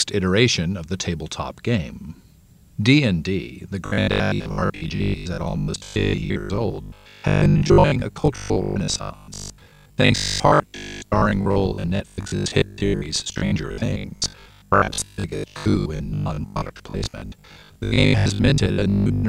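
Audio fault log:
3.86–19.28 s, robotic sound from repeated short buffers: the speech becomes a rigid, metallic buzz pitched at 50 Hz that only loosely follows the words. This likely comes from roughly half the audio being replaced by repeats of the last 20 ms buffer while fresh data was late.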